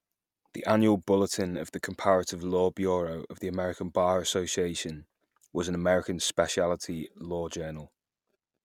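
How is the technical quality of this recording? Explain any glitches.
The technical quality of this recording is good, with no glitches to explain.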